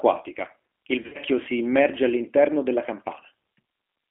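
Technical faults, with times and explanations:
Throughout: G.729 codec. The speech sounds slightly rough and synthetic, with a narrow telephone band running from about 250 Hz to 3.4 kHz, so sibilants lose their edge and the low body is thin. At 8 kbit/s the codec doesn't send the waveform. It rebuilds each 10 ms frame from a vocal tract filter, a pitch predictor and a few coded pulses, and that approximation is plainly audible on every phrase.
1.03–1.17 s: VoIP packet loss concealed by the speech codec. Just before "si immerge all'interno della", the voice smears into a stretched sound that sags and weakens, then recovers roughly. About 100 ms of audio is missing, scattered over 120 ms, with the longest gap 60 ms. That points to roughly ten lost 10 ms frames. The decoder fills each gap by repeating its last pitch and filter at falling gain. Because each frame depends on the previous one, the voice stays weak or distorted for tens of milliseconds or more after real packets resume.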